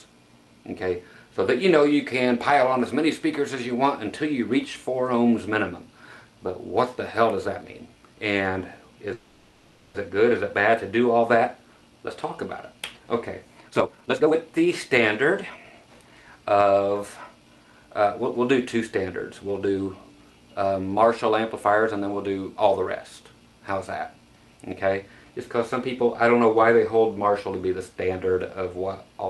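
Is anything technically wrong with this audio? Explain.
Yes. There are two kinds of fault.

From 9.13 to 9.96 s there is a call audio freeze. The last sound stretches into a fading buzz or hiss for about 0.81 s. It is likely that delayed packets emptied the jitter buffer.

There are two jitter buffer speed-ups. From 13.60 to 14.85 s the sound runs at 156% speed at unchanged pitch, and roughly 0.7 s is cut away. From 15.50 to 16.32 s it runs at 113% speed, losing about a tenth of a second. The receiver trimmed tiny pitch-period slices to shed its excess delay.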